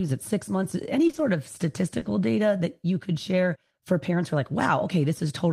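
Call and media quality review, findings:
Brief smeared wobble at 1.07–1.19 s after "at six months" and at 1.99–2.07 s before "data that you could". Short concealed packet loss: the receiver's decoder repeatedly extrapolated over 20 ms gaps.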